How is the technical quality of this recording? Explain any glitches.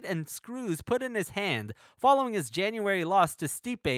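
No glitches turn up anywhere in this recording, so there's nothing here to explain.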